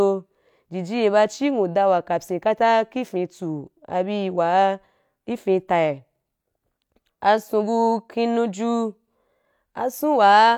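Speech, with nothing technically wrong to point to at any time in the clip.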